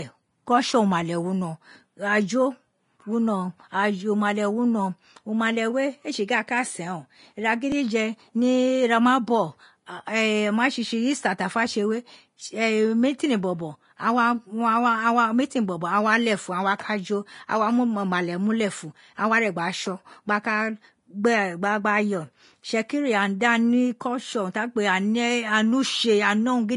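Right from the start the speech has that hissy, grainy treble you get from Vorbis compression at a low setting, likely squeezed to something near 32 kbps. Nothing survives above 10.5 kHz, and the upper detail has turned into noisy hash, so tones sound roughened and consonant attacks are smeared.

At 7.72 s there's a tiny jump in the sound, which is what a dropped buffer from an overrun sounds like. A very short slice, a millisecond or two, was likely overwritten before it was read, and the two sides got spliced together without any gap.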